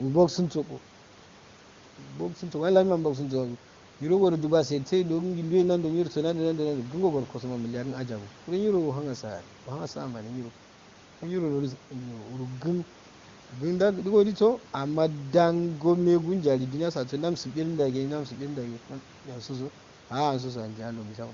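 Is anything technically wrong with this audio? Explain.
No, nothing is technically wrong: the speech runs over an AMR wideband (HD Voice) link at 23.85 kbit/s, the codec's top rate, where any coding effect is faint at most.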